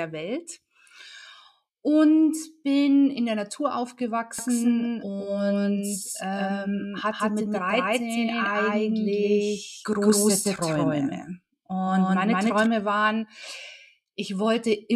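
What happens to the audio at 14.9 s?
Nothing goes wrong at 14.9 s: the audio there plays through intact, with no audible fault.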